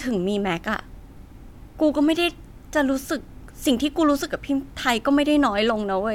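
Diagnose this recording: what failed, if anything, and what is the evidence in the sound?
Nothing failed, and the sound of this speech recording gives no evidence of a fault.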